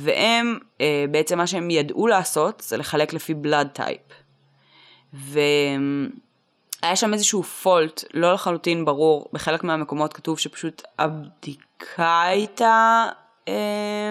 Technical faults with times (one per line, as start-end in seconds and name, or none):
10.79-14.11 time-stretched section